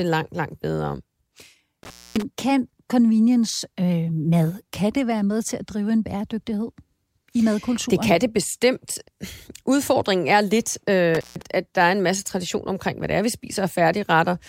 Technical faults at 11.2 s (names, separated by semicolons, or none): intermittent contact